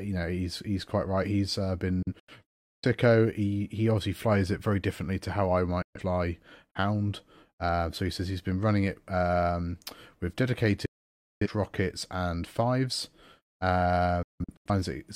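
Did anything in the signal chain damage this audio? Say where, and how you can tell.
Yes. The sound is chopped by digital broadcast dropouts: hard, near-instant mutes with only about a 3 ms fade, at 2.02 s (broken holes across about 0.77 s), 5.82 s after "differently to how I", 10.86 s after "running it um with", returning at "rockets and fives", and 14.23 s (scattered over about 0.43 s). At the reception stage, frames arrived corrupt or not at all, and the receiver muted until clean frames resumed. The missing sound is gone, not delayed.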